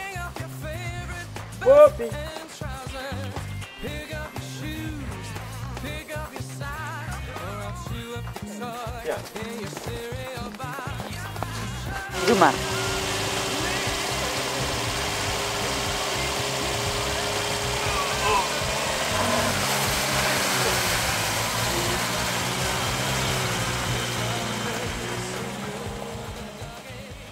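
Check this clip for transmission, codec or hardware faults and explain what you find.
No transmission, codec or hardware faults can be heard anywhere in the recording, and the signal stays continuous and stable throughout.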